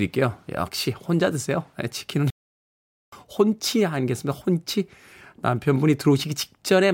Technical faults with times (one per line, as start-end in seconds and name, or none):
2.30-3.12 playback stall